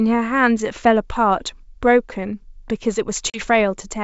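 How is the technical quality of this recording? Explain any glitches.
One clear glitch stands out, in wideband speech whose light upper-band hiss is typical of G.722 at its full rate. At 3.30 s the speech drops into an abrupt, hard-edged silence of about 40 ms, roughly two packets' worth, then comes back with some distortion until it settles by about 3.42 s. This is packet loss on an ADPCM call: after the gap, the decoder's predictor and step size no longer match the sender's and take tens of milliseconds to realign.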